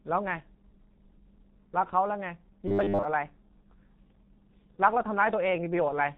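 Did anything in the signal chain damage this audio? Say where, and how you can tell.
Yes. The codec stage damaged the whole clip. It carries the signature of the G.723.1 codec, heavily degraded: the spectrogram shows a hard ceiling at 4 kHz with nothing above it, and the speech sounds muffled and hoarse with smeared consonants. Those traits point to a bitrate around 6.3 kbit/s. The codec models the voice in coarse 30 ms frames, so fast changes such as plosives and fricatives blur together and the fine detail simply isn't encoded.

From 2.68 to 3.06 s the speech turns into a rigid, metallic buzz, the robotic sound from repeated short buffers, which most likely comes from the driver or buffer stage. The buzz sits at 100 Hz, which fits a 10 ms chunk being replayed over and over while new audio arrives too late. Most of that stretch is repetition rather than fresh signal. On a waveform it appears as identical 10 ms cycles, and on a spectrogram as a comb of harmonics spaced 100 Hz apart.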